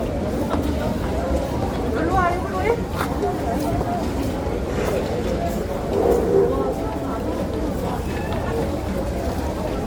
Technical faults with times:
0.00-9.86 generation loss

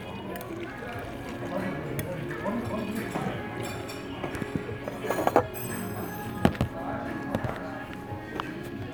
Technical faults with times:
none

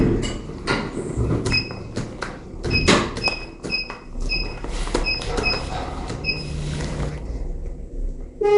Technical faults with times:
0.00-8.57 Nellymoser compression

